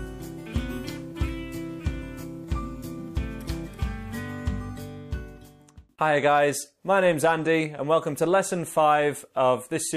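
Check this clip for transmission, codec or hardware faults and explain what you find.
There's sample clock jitter running through the whole clip. The converter's clock wobbles by a microsecond or two, so samples land slightly early or late, and steep waveform slopes pick up error. You hear it as roughness, maybe 40 dB down, rising on loud, bright passages and vanishing in silence.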